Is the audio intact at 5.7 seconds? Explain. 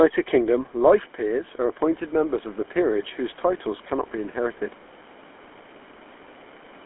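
No. At 5.7 s, as everywhere in this speech, the GSM full-rate codec rebuilds the voice from a vocal-tract model and sparse pulses within about 250 Hz to 3.4 kHz, leaving a plainly buzzy, gravelly roughness.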